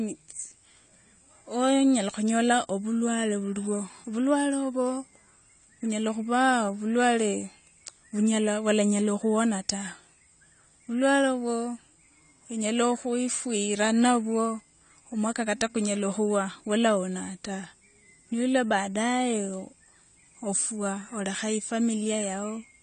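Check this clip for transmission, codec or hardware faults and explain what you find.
There is one fault, present from start to finish: the speech sounds dull and smeared, with nothing above 9 kHz and a warbling, fizzy edge on sibilants. This is likely AAC compression, with AAC-LC quantising each frame's spectrum so coarsely that the top band is dropped and gaps open, which fits a low bitrate around 32 kbps.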